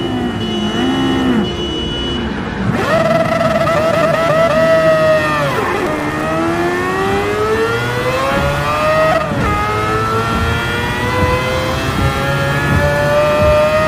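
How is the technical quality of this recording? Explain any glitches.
There is one glitch: processor overload crackle from 5.74 to 6.23 s. Around twenty missed buffers of a few milliseconds leave tiny silent gaps, heard as gritty tearing rather than a single clean dropout.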